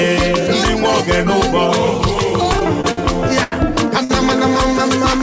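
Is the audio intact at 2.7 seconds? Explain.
No. At 2.7 s the audio sits inside a run of repeated stalls (stutter) lasting from 2.44 to 2.99 s. Packets arrived late, so the jitter buffer kept running dry and the receiver filled five short gaps, the longest about 55 ms, by stretching the last sound. About a fifth of that span is filled-in rather than original. Nothing is actually lost. Unlike dropouts, where sound vanishes, this drags and hiccups, and the same sound repeats briefly before the audio moves on.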